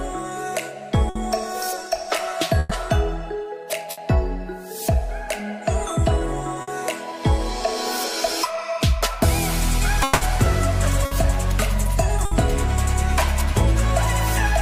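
Bursts of packet loss occur at 1.09–1.18 s, 2.59–2.74 s, 3.91–4.00 s and 6.61–6.70 s. In each, consecutive packets never reached the player, so the receiver extended the last sound as a decaying buzz or hiss for 60 ms (120 ms at 2.59 s) and then resumed with that span missing.

At 10.03–10.24 s the sound is replaced by a fading extension of the preceding audio for about 180 ms, with no true silence, then picks up further along. The likely cause is a long network dropout.

Two more bursts of packet loss follow at 11.05–11.14 s and 12.25–12.34 s, each filled with a 60 ms fading continuation before playback jumps ahead.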